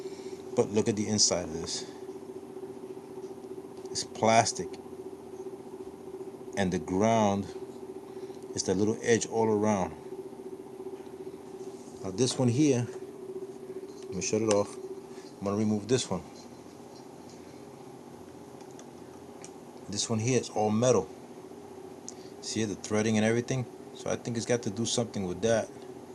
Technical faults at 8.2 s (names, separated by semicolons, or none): none